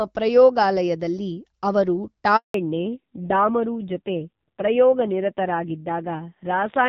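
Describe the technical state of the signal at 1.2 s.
At 1.2 s the signal is intact, with the speech carried through the AMR wideband (HD Voice) path at 12.65 kbit/s and no fault present.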